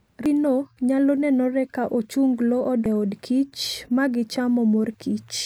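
At 0.26 s and again at 2.86 s, the speech breaks with a brief glitch. Both are damaged data in a compressed stream. Corrupted bytes make the decoder misread those frames and lose sync. It then hunts for the next valid frame header.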